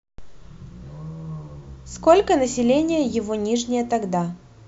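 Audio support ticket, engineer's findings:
No faults found on listening to the speech recording. Nothing to escalate or assign to a component on this ticket.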